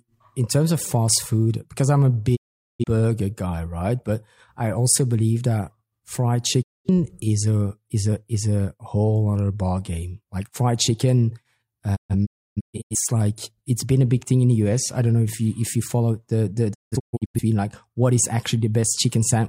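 Speech broken by four sudden silences, each faded out over about 20 ms: 2.35 to 2.84 s after "food because I'm a", 6.62 to 6.90 s after "also believe that fried", and clusters of short holes across 11.95 to 12.96 s and 16.73 to 17.40 s. This is digital broadcast dropout: the receiver muted when frames were lost or corrupted, and that audio is gone.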